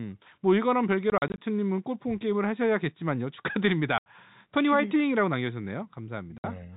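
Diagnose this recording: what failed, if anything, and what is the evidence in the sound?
The network stage failed, with packet loss filled with silence. Holes cut the speech at 1.10 to 1.38 s, where 120 ms is lost in runs up to 40 ms, then 80 ms at 3.98 s and 60 ms at 6.38 s. The gap lengths fit 20 ms packets. Each missing packet played as silence, so the holes have hard edges.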